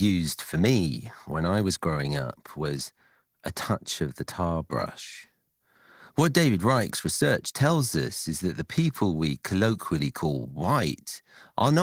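Speech recording, no technical faults detected.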